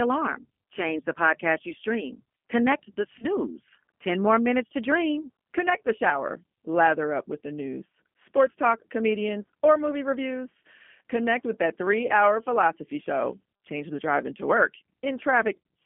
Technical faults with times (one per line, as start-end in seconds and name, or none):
0.00-15.86 G.729 codec
3.19-3.26 VoIP packet loss concealed by the speech codec
12.07-12.13 VoIP packet loss concealed by the speech codec
14.86 VoIP packet loss concealed by the speech codec